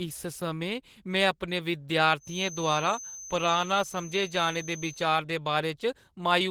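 Right from the start, the whole speech clip carries Opus voice compression, and it's plainly audible: a hoarse, slightly robotic edge from the coarsely coded excitation. The band still runs fullband, so it sounds like hybrid mode with SILK below 8 kHz and CELT on top, which fits a low bitrate around 16 kbps.

Just after "समें में अपने", from 2.17 s to 5.09 s, a thin, steady feedback whistle sits at 6.2 kHz, roughly 15 dB under the speech and swelling and fading slowly. It's likely a loudspeaker-to-microphone loop hovering right at the edge of feedback without running away.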